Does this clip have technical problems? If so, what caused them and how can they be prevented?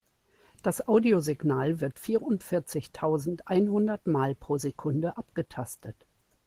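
No, nothing stood out as a technical problem on listening to this speech clip, so there is no cause to trace and nothing to prevent.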